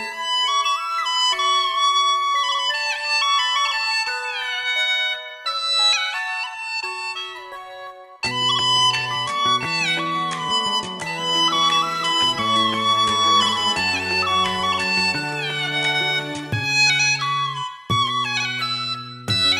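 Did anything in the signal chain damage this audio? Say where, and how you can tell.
Yes. There is a wrong sample rate at playback, throughout the clip. Everything runs 1.5 times fast and about 7 semitones high, which fits 32 kHz material being played unconverted at 48 kHz.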